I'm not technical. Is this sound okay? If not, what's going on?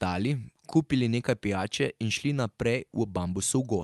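Yes, nothing stood out as a problem when listening to this speech, which sounds like it came through an ordinary online call.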